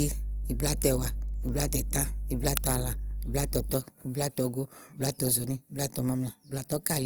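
A speech recording whose whole length sounds grainy and rough, with a noisy sheen on the voice's tones, though the top end stays open, with content reaching about 20.2 kHz. That is plainly audible codec damage, likely from Opus compression in its CELT music mode. The encoder keeps each band's energy but, short of bits, fills the fine detail with folded or noise-like content, which fits a rate of around 24 kbps. From the start to 3.72 s a steady low drone sits under the speech at 50 Hz, loud enough to be only a few decibels below the voice, and then stops. This is mains hum, the power-line frequency leaking into the signal through a ground loop or a nearby transformer while that part was captured.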